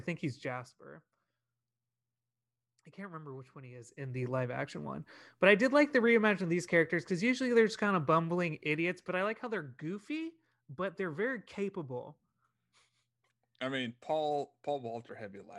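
Right at the start, from 0.3 to 0.84 s, there's zipper noise: the level drops by around 15 dB, but in coarse unsmoothed steps, roughly fifty a second, so each jump clicks and you hear a quick zipping ride over the speech.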